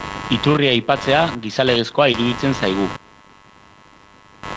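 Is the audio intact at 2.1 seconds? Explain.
No. Around 2.12 to 2.16 s there's a short concealed packet loss: about 20 ms of audio arrived too late, so the receiver extended the previous sound and blended back, leaving a brief smear or wobble. Underneath, computer activity noise keeps buzzing, pulsing at roughly 100 Hz, about 15 dB below the speech.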